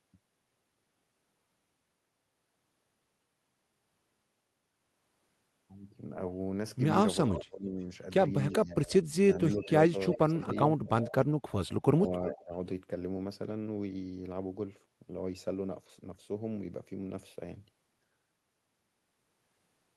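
An echo leak likely begins at 7.26 s: a loudspeaker-side echo canceller let part of its own playback back into the outgoing speech. It is heard as a faint delayed copy trailing by about 360 ms, roughly 15 dB below the speech, from 7.26 to 7.41 s.

From 7.33 to 7.77 s comes speech suppressed in double talk, likely because the canceller could not tell the near talker from the echo while both sides spoke and turned everything down. The speech sinks by as much as about 25 dB.

The same suppression returns from 8.59 to 11.15 s, where the speech repeatedly dips by up to about 15 dB for around a second in total. Within that span the 360 ms echo slips through again at 9.33 to 9.57 s, 10.08 to 10.45 s and 11.01 to 11.12 s.

A final pairing follows. Suppression from 11.9 to 12.52 s pulls the speech down by about 20 dB, and echo leaks in at 12.03 to 12.3 s, again about 360 ms late and about 15 dB under.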